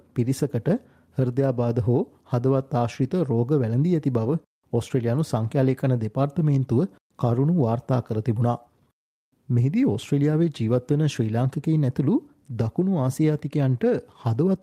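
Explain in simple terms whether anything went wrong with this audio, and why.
Nothing went wrong with this audio, because no problem can be heard anywhere in it.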